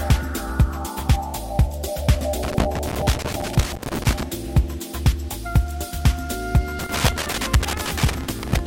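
From 2.43 to 4.23 s and again from 6.79 to 8.59 s, loose connector crackle breaks in as irregular scratching bursts of about 1.8 s each. A worn contact is repeatedly opening, chopping the signal, and the waveform shows jagged dropouts and spikes that appear as broadband vertical streaks on a spectrogram.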